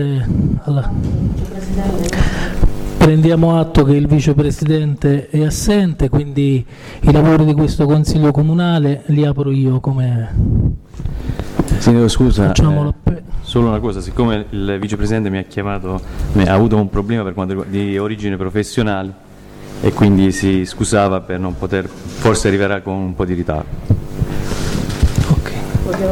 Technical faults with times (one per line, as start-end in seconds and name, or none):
none